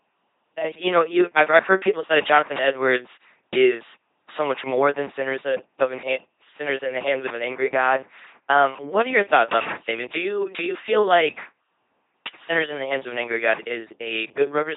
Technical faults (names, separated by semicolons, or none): LPC-10 vocoder